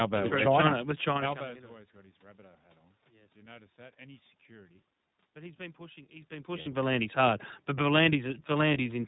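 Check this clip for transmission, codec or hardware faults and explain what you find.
Two kinds of fault are audible: narrowband iLBC coding throughout, and two short dropouts covered by iLBC packet loss concealment.

iLBC codec, across the whole clip: the speech has been squeezed through a narrowband VoIP codec that codes each short frame's excitation on its own, without relying on the previous frame. Everything above 4 kHz is gone, so the speech sounds boxed-in and muffled at the top, with a plainly audible rough, slightly synthetic edge. The character fits the 20 ms frame mode at roughly 15 kbps.

Lost iLBC frames, at 6.62 to 6.68 s and at 8.74 s: packets went missing. The first gap lasts 40 ms, about two 20 ms frames, and the second lasts 20 ms, about one frame. Each time, the decoder filled the hole by repeating the last pitch cycle blended with noise. That is heard as a brief held, faintly buzzy vowel where the speech should have continued. 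Because each frame decodes independently, the speech snaps back to normal immediately after each gap.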